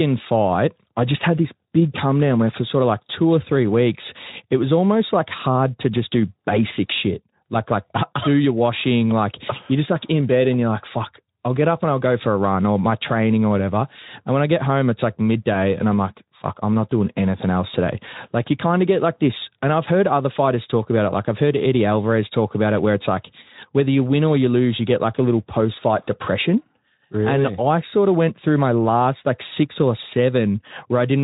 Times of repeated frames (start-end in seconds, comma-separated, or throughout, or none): none